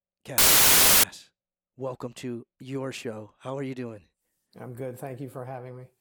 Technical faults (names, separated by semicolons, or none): file tags played as audio